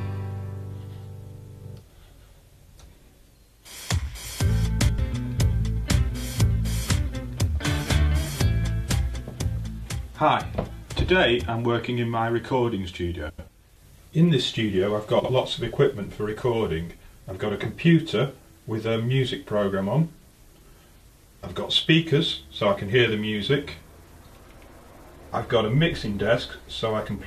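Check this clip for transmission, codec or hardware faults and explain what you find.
Three brief reorderings show up, all frames out of order. They occur at 4.79 to 4.99 s, 13.29 to 13.49 s and 15.19 to 15.30 s. Two neighbouring blocks swapped places, about 93 ms each in the first two and 46 ms in the last, which fits runs of four and two frames. Each stretch plays with its halves exchanged, a garbled flutter, and no time is lost.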